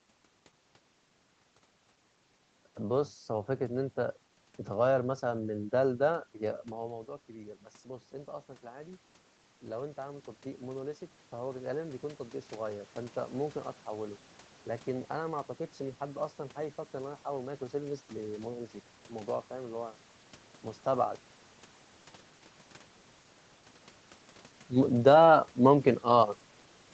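A speech recording passed through a call path, with nothing above about 8 kHz. From 9.62 s to 14.26 s, automatic gain rising is audible. The input had dropped by about 14 dB. The gain control then lifted its gain by about 6 dB over those few seconds. Voice and room noise swell together.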